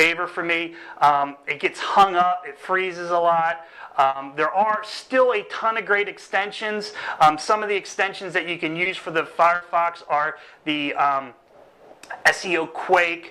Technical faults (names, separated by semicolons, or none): short concealed packet loss; burst of packet loss